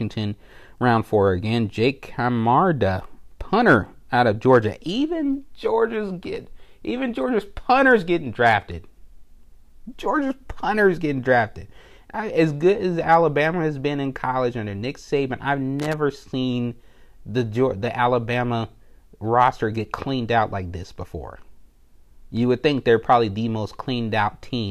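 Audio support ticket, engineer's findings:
Loose connector crackle, 15.79–15.94 s, just before "seen the the". Irregular scratchy burst; worn or dirty contact making and breaking, chopping the speech signal. Check cable connectors.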